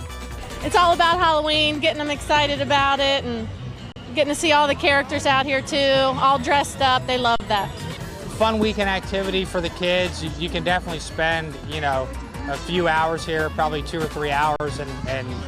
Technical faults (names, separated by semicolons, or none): underrun with held sample